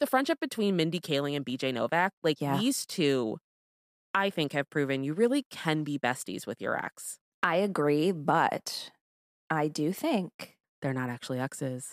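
No technical faults are audible anywhere in the speech recording.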